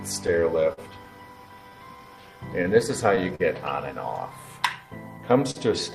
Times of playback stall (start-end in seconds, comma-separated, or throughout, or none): none